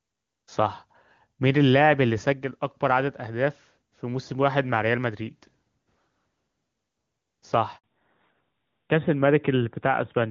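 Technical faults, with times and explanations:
7.78 to 7.84 s, handover gap: the speech just drops out for about 60 ms, fading within a few tens of milliseconds rather than clicking off. The call was being passed from one network to another, and while the phone switched links no speech frames came through, so that slice of audio is gone, not delayed. When the new link picks up, the sound returns with a different character.
7.84 s to the end, fallback to narrowband: right after the gap, everything above 4 kHz disappears and stays gone for the last couple of seconds. Before this point the speech has the open, airy top end of HD Voice, which sounds like AMR-WB at its highest rate with little or no audible codec damage. After the handover the call landed on the older narrowband codec, likely AMR-NB at around 12.2 kbit/s. Sibilants lose their edge and the voice turns duller and rougher.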